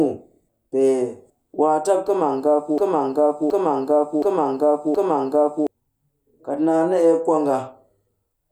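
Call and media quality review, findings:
Broken-record loop, 2.78 to 5.67 s. A single 0.72 s stretch of the speech replays four times back to back, each pass identical, with no new material until 5.67 s. Speech belonging to that window is missing. Probable component: player or stream buffer. Mechanism: likely a stall upstream, with the last held fragment resent in place of fresh audio until the feed resumed.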